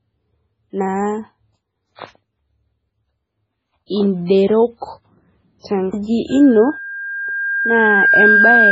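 MP3 compression runs through the whole speech clip. It sounds watery and swirly, and nothing is left above 7.6 kHz. That is likely the result of a very low bitrate, around 16 kbps. With so few bits, the encoder discards weak frequency lines, and those lines flicker on and off from frame to frame. The hard treble cut-off is what removes the top of the spectrum. The codec damage is heavy.

Pre-echo comes before three attacks: 1.95 to 1.99 s (33 ms), 3.86 to 3.90 s (40 ms), and 5.59 to 5.64 s (51 ms). Each time, a short hiss leads into the attack, which then sounds smeared. The codec spreads quantisation noise evenly across a whole block. When an onset lands late in a block, noise scaled for the loud part spills into the quiet moment just before it.

Loudspeaker feedback squeal starts at 6.30 s and lasts to the end. A single 1.6 kHz tone swells over roughly two seconds until it sits around 5 dB above the speech. 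The microphone is picking up the loudspeaker it feeds, and at 1.6 kHz the loop gain exceeds one. That frequency amplifies itself on each pass around the loop until the amplifier limits it, and it never falls back during the clip.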